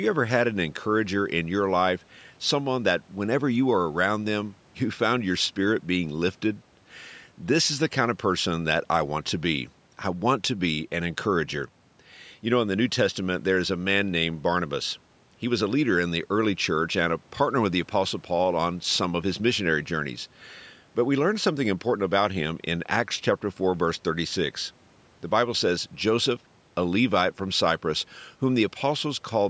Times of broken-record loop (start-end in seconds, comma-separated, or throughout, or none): none